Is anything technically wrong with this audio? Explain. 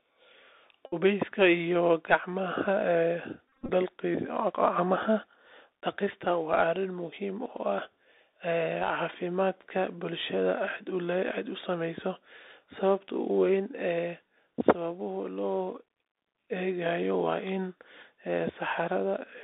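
Yes, there are two problems. The whole clip goes through a Bluetooth CVSD headset codec. That's a one-bit-per-sample, 64 kbps stream with an adapting step size, so the sound sits in a roughly 250 Hz to 3.7 kHz band. You get a granular hiss underneath, s sounds turn scratchy, and loud bright bits distort where the step can't keep up.

There's also a Bluetooth headset packet repeated fault, from 0.86 to 0.96 s and again from 3.48 to 3.70 s. Lost voice packets get replaced by replaying the previous packet's bits. In the first stretch that gives a short steady buzz near 267 Hz from the 3.75 ms repeat rate. The second is broken up, with runs of around 30 ms at most, so it sounds like choppy buzzy bursts.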